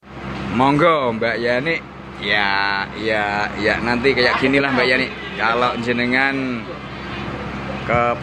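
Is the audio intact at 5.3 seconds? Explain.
Yes, the audio is intact at 5.3 seconds, with no dropout, click, distortion or other fault at that moment.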